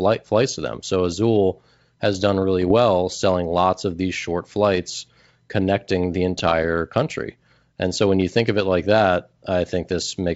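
Bit errors on an ADPCM link corrupted the G.722 decoder's step size and predictor from 2.62 to 2.73 s, after "has done really", and from 6.38 to 6.53 s, after "short flights connecting the", producing pops and rough bursts with brief level jumps.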